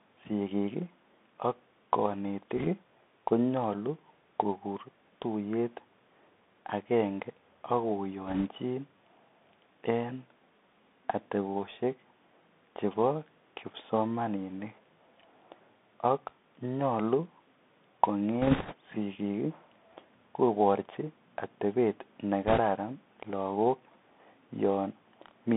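From the start, the speech carries the Bluetooth CVSD headset codec sound, which fits a 64 kbps link. One-bit delta coding squeezes everything into roughly 250 Hz to 3.6 kHz, so a spectrogram shows a hard ceiling near 3.6 kHz. Sibilants turn scratchy over a grainy hiss floor. Bit errors on the Bluetooth voice link add bursts of rushing crackle, with no sharp clicks, at 2.57 to 2.68 s (just before "konyolu kokur tuyet"), 8.27 to 8.46 s (after "akenge ak"), 18.42 to 18.73 s and 22.47 to 22.60 s (after "koborchi atebet"). The last two come from a heavier error rate, around several percent, and sound rougher. Each burst shows as a smear of broadband noise inside the band and a fuzzy, thickened stretch of waveform.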